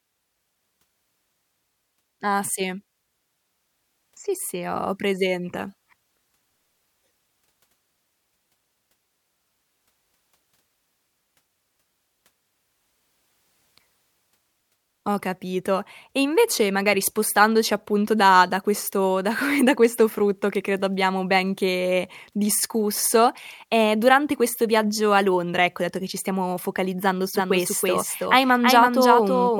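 Speech, with a doubled audio track from 27.35 s, right after "che ci stiamo focalizzando", to the end. A full-band copy roughly 5 dB quieter trails about 300 ms behind with no decay, most likely from a second, slower capture path. On a spectrogram every syllable appears twice, offset in time, and the copy begins abruptly.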